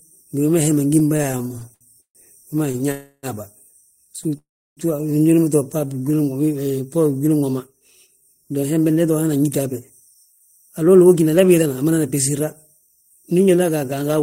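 From 0.99 to 2.82 s the speech breaks into repeated stalls (stutter): sixteen short gaps, the longest 141 ms, are bridged by stretching the last sound. Packets kept arriving late, so the jitter buffer ran dry again and again, and about 22% of that span is filler, though nothing is lost.

At 2.91 to 3.26 s there is a single call audio freeze. The last sound holds for 315 ms as a continuing buzz before the speech resumes where it stopped. Unlike the stutter, this is one sustained hold rather than a chain of brief catches, likely from packets held up in transit.

A brief stutter returns from 4.19 to 4.32 s with three tiny gaps, none longer than 12 ms. A second freeze follows at 4.37 to 4.80 s. It lasts 393 ms, and 330 ms of that decays into silence. The speech then picks up without anything missing.

From 5.86 to 6.18 s a jitter buffer slow-down repeats pitch periods to rebuild the buffer's reserve. 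It adds 63 ms and plays at 82% speed. Sounds draw out at unchanged pitch, which separates it from a freeze's fading hold.

From 7.6 s to the end a jitter buffer speed-up trims short pieces of pitch periods to cut excess delay. This removes about 0.7 s and runs at 109% speed. The speech sounds hurried with the pitch unchanged, with no gaps or drawn-out sounds.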